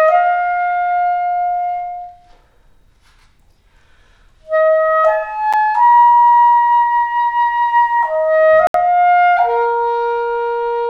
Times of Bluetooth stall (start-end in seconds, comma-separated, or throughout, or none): 5.53, 8.67-8.74